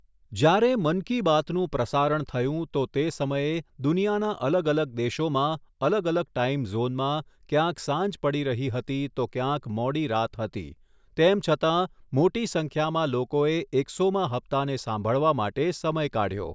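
No technical faults occur at any point in the recording.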